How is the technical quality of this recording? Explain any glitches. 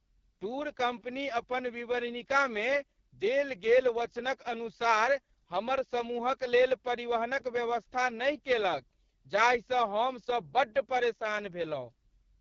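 Technical quality is poor throughout. The whole recording has passed through an AMR wideband (HD Voice) codec at what sounds like its lowest rate, about 6.6 kbit/s. The coder squeezes speech into a crude pulse-excited vocal-tract model, so voices come out rough and raspy, with nothing above about 7.6 kHz.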